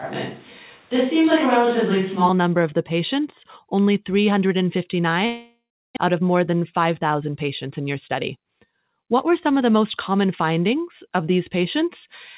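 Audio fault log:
0.00–2.29 s, switch to a distant microphone: Speech starts roomy and hollow, thin in bass, with room noise about 35 dB down. The mic was likely distant.
5.26–5.99 s, long network dropout: The last sound trails off as fading buzz, then about 0.3 s of silence. A likely delivery gap lost roughly 0.4 s.
6.07–7.88 s and 8.36–10.26 s, jitter buffer speed-up: Speech runs 7% fast at unchanged pitch, sounding hurried. Trimmed pitch periods remove about 150 ms in each stretch.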